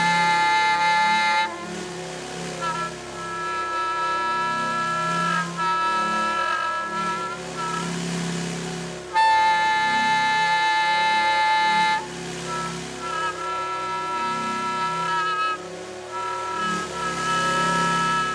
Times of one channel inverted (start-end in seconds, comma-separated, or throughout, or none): none